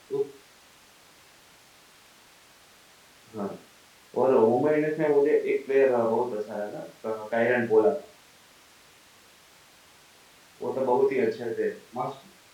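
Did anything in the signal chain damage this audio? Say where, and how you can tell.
No, nothing in the chain from capture to playback has audibly damaged this speech recording.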